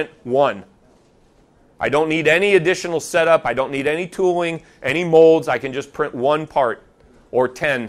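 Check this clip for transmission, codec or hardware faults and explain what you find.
One fault is present: a brief burst of hard clipping in the speech. It runs from 5.15 to 5.26 s, about a tenth of a second. For that span the signal was pushed about 1 dB past what some stage could pass. The waveform peaks were cut flat there. Those flat tops add harmonics high in the spectrum. Because the overload is small, it is heard as crackle on the loudest peaks within that span.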